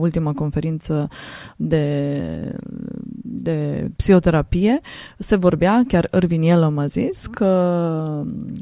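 No technical faults can be heard anywhere in the speech. There is no moment in the recording where the signal chain audibly goes wrong.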